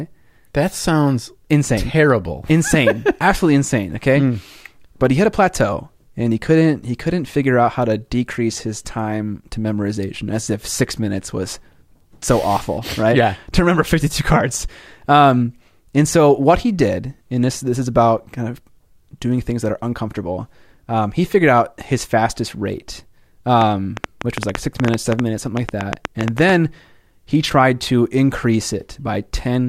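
Right after "out his fastest rate", from about 23.6 to 26.5 s, a train of clicks ticks over the speech, around 7.6 per second, irregularly spaced, roughly twenty in all, poking well above the level of the speech. Likely interference or a faulty connection or power supply injecting pulses.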